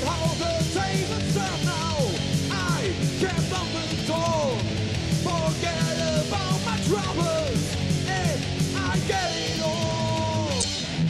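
At 10.60 to 10.65 s there's damaged data in a compressed stream: the decoder hit corrupt frames and lost sync while hunting the next header, giving a brief glitch.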